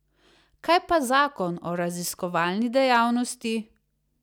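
Hard clipping hits this speech clip from 2.92 to 2.97 s, just after "o raziskovalni": the level overdrives a stage by about 2 dB, so the peaks are sliced flat, and the squared-off tops add high harmonics heard as a brief crackle.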